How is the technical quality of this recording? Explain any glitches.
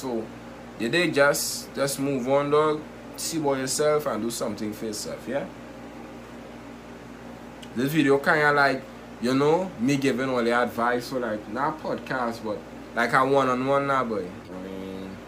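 There are no glitches to explain; the technical quality of this recording holds up with nothing going wrong.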